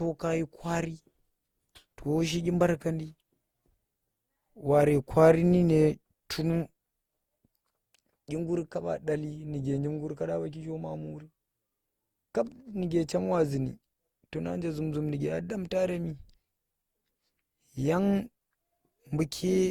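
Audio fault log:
throughout: generation loss. The speech has a swirling, hollow, smeared quality, with consonant attacks blurred, more than the bandwidth would suggest, since content reaches up to 20.2 kHz. The likely cause is repeated lossy re-encoding, around seven passes through Opus at a rate that points to roughly 64 kbit/s. Each pass quantises again on a shifted frame grid, so the noise from every generation piles up rather than cancels.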